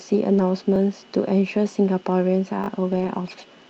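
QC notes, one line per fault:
0.33–0.39 s and 2.91–3.09 s, lost packet rebuilt from error correction: no gap, but about 40 ms and then 100 ms turn rougher and noisier. The decoder is playing low-bitrate backup copies carried in the next packets.
0.76 s and 2.64–2.68 s, repeated buffer: a 20 ms chunk plays twice and then three times, with hard joins, so you get a quick stutter where the device replayed its last buffer.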